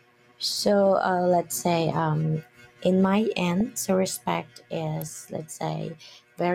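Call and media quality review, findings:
Call and media quality review, findings:

DAB burbling at 3.60 s: brief burbling over the speech. Residual bit errors, at a rate on the order of a tenth of a percent, slip past error correction into the MP2 data. Corrupted samples add noise blips in single sub-bands; corrupted scale factors make sub-bands jump in level.

Electrical switching spike at 5.02 s: sharp snap or tight cluster of clicks added on top of the speech, very short. Likely a nearby switch, motor or static discharge arcing and coupling into the audio line as an impulse.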